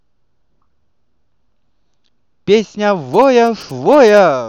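A speech recording with GSM signalling bursts from 3.14 to 4.19 s. A galloping dit-dit-dit of short 217 Hz buzzes cuts in, roughly 25 dB below the speech. A nearby 2G phone is signalling, and the audio circuit rectifies its radio bursts.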